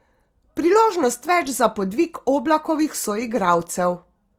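Throughout, the speech sounds grainy and rough, with noise-filled bands reaching 20.2 kHz. This is likely Opus compression in CELT mode at around 24 kbps.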